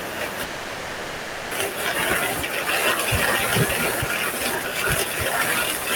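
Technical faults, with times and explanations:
0.43–1.54 s, long network dropout: a fading buzz fills about 1.1 s, likely concealment after lost audio; the spectrogram shows smeared, repeating bands, then speech abruptly resumes.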